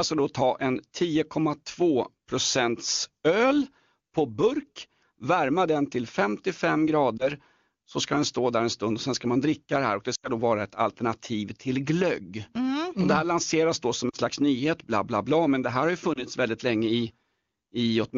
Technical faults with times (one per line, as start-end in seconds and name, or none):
7.18-7.29 lost AMR speech frames
10.15-10.30 lost AMR speech frames
14.10-14.16 lost AMR speech frames
16.14-16.24 lost AMR speech frames